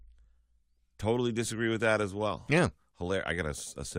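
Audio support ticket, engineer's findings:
Overlap between stream segments at 2.91 s: a tiny skip where about 11 ms of speech is cut at a segment boundary. The waveform jumps straight on without a silent gap, unlike a dropout.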